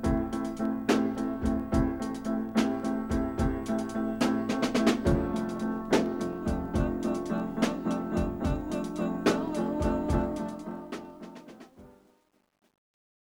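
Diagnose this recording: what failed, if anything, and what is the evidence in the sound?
Truncation distortion on the fade-out, in the sample-format conversion or gain stage: from 10.12 s the fade turns gritty, and from 11.04 s to 13.32 s the grit is at its worst. The waveform shows square steps and the spectrogram shows broadband fizz, consistent with roughly 10-bit, undithered requantisation.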